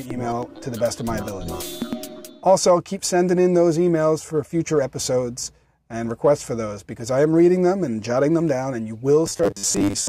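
Robotic sound from repeated short buffers runs from 9.27 to 10.09 s. The audio turns into a rigid, metallic buzz near 100 Hz, with about half the material repeated. This is likely from new data arriving too slowly, so a 10 ms buffer loops in place of skipped audio.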